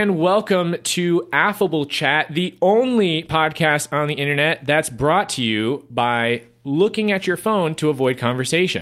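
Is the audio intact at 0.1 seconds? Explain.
Yes, at 0.1 seconds the speech plays through intact, with no dropout, click, distortion or other fault to be heard at that moment.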